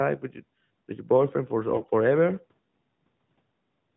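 Speech carried over the AMR narrowband mobile codec, whose light, fairly clean coding fits its top 12.2 kbps mode and leaves nothing above 4 kHz. From 1.72 to 1.87 s, AMR bit errors turn the voice hoarse and gargly. Weakly protected bits, a few percent of them, are flipped across roughly seven frames, which misplaces excitation pulses and skews fine gain and spectral values. Pitch and loudness hold, so the waveform envelope barely changes. On a spectrogram, the harmonics blur into scratchy, noisy energy between them, still capped at 4 kHz.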